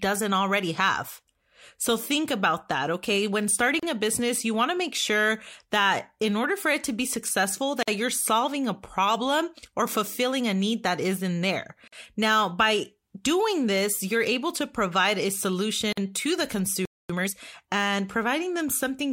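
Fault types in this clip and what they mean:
Gap at a join of encoded pieces: at 3.80, 7.83, 11.88 and 15.93 s, a silence opens in the speech every 4 s, about 33 ms the first time and 49 ms after that. The speech was encoded in separate pieces and joined untrimmed, so each piece's encoder start-up delay and last-frame padding remain as a brief hole. The one at 7.83 s follows "it to be successful", and the one at 15.93 s comes just before "to the".
Playback stall: from 16.85 to 17.10 s, just after "to the", the speech cuts out for about 240 ms and then resumes where it stopped. The likely cause is the player running short of data or its thread being blocked, leaving the output with nothing to play until it recovered. This is a noticeable halt in mid-flow, far longer than the regular join gaps.
Time-compressed catch-up: from 17.10 to 17.34 s, right after the stall, the speech rushes by at double speed for about a quarter of a second while keeping its normal pitch. 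The player is clearing the backlog built up during the dropout by cutting small slices out of the audio and cross-fading over the joins, which squeezes the delayed stretch into half its original duration.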